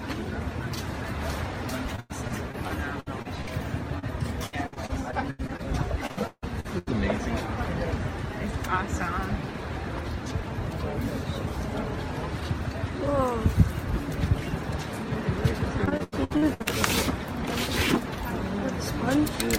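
Repeated packet loss (robotic sound) runs from 1.96 to 3.49 s, then 4.46 to 5.60 s, 6.06 to 6.89 s and 15.85 to 16.67 s. Packets kept going missing, with eight gaps in most stretches and five in the third. Each hole was patched by extending the last sound, so the audio turns choppy and robotic with pieces missing. Between 3.99 and 4.04 s, a short concealed packet loss drops about 40 ms. The fill causes a brief smear before blending back.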